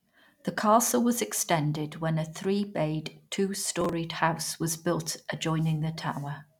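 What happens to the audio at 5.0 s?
Nothing goes wrong at 5.0 s; the speech continues intact through that moment.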